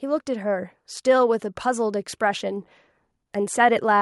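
From 0.05 to 2.69 s the level of the speech and its background swells together by about 4 dB: automatic gain rising, as the control raises its gain on input it judged too quiet.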